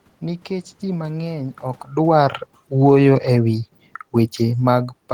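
From 1.95 s to 4.92 s, automatic gain falling: the gain control judged the input too loud or its background noise too strong and eased its gain down by about 4 dB. Speech and room noise sink together. The waveform envelope tapers steadily, and a spectrogram dims evenly across all bands, noise floor included.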